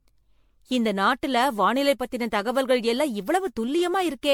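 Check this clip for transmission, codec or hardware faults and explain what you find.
One codec fault runs through the whole speech clip: generation loss. Swirly, hollow smearing and blurred attacks exceed a single 96 kbit/s encode, likely from around ten MP3 passes on shifting frame grids, with nothing above 19.9 kHz.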